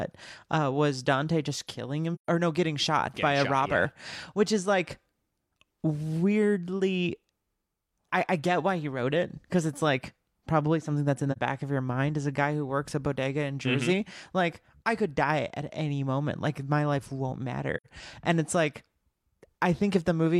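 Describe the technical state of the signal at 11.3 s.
AAC frame loss with muting from 11.32 to 11.38 s, after "something that's in the": a zeroed frame, about 43 ms, fades softly out and back.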